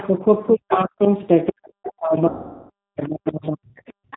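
Throughout, the speech carries the sound of the G.729 codec, in its G.729A form at 8 kbit/s, and the damage is plainly audible. The codec rebuilds each 10 ms frame from a vocal tract filter, a pitch predictor and a handful of pulses, so nothing above 4 kHz survives and the voice turns rough and synthetic. Unlike an ordinary low-pass filter, the roughness follows the pitch and spectral envelope frame by frame. The call microphone processing's high-pass trims the lowest bass, which is expected.

From 0.0 to 0.08 s, 0.71 to 1.12 s, and again from 1.87 s to the end, a second voice sits underneath, about 20 dB below the main speech in the first stretch and about 25 dB below in the later two. This is likely the other side's voice leaking through: the far end played on the talker's loudspeaker and the echo canceller left residue in the microphone. It differs from crosstalk because it shares the talker's codec and room.

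Between 0.19 and 3.78 s the main voice sinks, by around 40 dB at its deepest, over roughly two seconds in total. That pattern points to speech suppressed in double talk, since the far side was likely playing on the loudspeaker while this side talked, and the canceller, unable to separate the two, turned the near talker down.

From 2.29 to 2.70 s, 410 ms of audio is missing and replaced: VoIP packet loss concealed by the speech codec. The decoder keeps extrapolating from its last pitch and filter, so the sound smears into a buzzy tone or coloured noise that fades rather than falling silent, which fits a run of roughly forty lost 10 ms frames. After packets return, the voice stays weak or distorted for a while as the predictor recovers, unlike a clean dropout.

At 4.06 to 4.11 s the room sound dips by about 23 dB for about 50 ms and then comes back. This is background gated by the echo canceller, a brief hard clamp on the microphone while the loudspeaker played. 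It is short and affects the background, not the talker, which separates it from the longer double-talk suppression.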